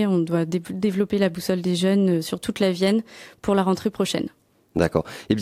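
No technical faults are audible.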